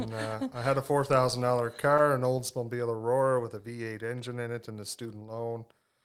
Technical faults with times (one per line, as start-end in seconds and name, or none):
none